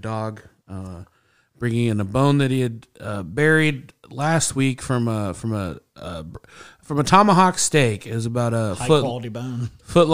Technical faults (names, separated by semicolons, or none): none